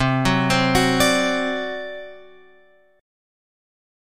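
No dropouts, clicks, distortion or timing problems turn up anywhere in the audio.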